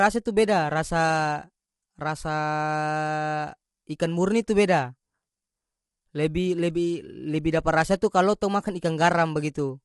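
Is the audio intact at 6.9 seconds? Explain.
No. At 6.9 seconds, as throughout the clip, the speech sounds rough and grainy, with a hiss filling the gaps between the harmonics and nothing at all above about 11.6 kHz. The likely cause is low-delay AAC compression of the AAC-ELD kind: its short frames separate pitch harmonics poorly and spend bits quickly, and the plainly audible damage fits a low rate of around 32 kbps, so detail is lost and the top band is removed.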